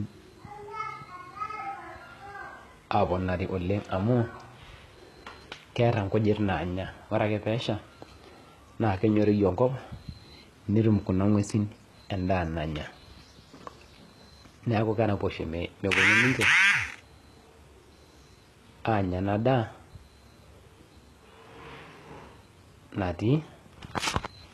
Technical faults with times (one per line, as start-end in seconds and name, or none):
0.00-24.53 HE-AAC compression